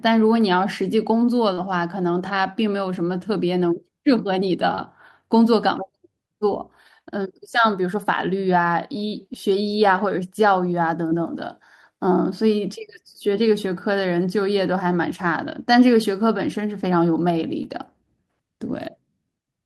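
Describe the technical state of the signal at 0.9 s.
At 0.9 s the speech signal is intact, with no audible fault at that moment.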